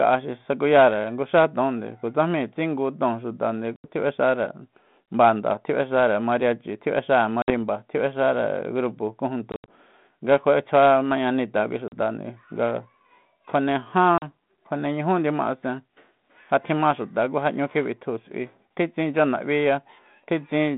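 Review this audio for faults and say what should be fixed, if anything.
Packet loss on an ADPCM call: packets went missing, the gaps were filled with silence, and the decoder's adaptive predictor and step size lost sync with the sender's. The speech drops out with hard edges, then resumes slightly distorted before settling. It happens at 3.76–3.85 s (80 ms lost), 7.42–7.51 s (60 ms), 9.52–9.73 s (120 ms scattered over 160 ms, longest run 80 ms, just before "nga kjua'etsjua mañanita kui"), 11.88–11.93 s (40 ms, just after "nga kjua'etsjua mañanita kui") and 14.18–14.24 s (40 ms). The losses come in steps that fit 20 ms packets on a 32 kbit/s G.726 link with a band of 150 Hz to 3.7 kHz. To fix this, add a jitter buffer with packet-loss concealment, and reset or re-converge the decoder state after each gap.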